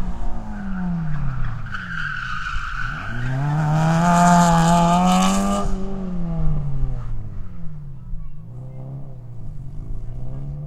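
No technical faults can be heard anywhere in this audio.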